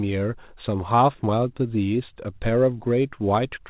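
No technical faults are audible.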